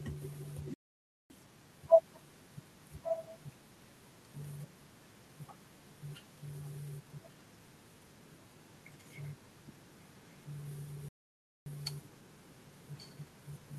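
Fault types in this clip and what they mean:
Playback stall: the speech cuts to silence at 0.74 s and 11.09 s for about 0.56 s and 0.58 s, likely the player starving or getting blocked.
Echo leak: a copy of the speech returns about 1.13 s late, loud at 3.0 s and faint at 13.0 s, likely a far-end canceller letting loudspeaker pickup through.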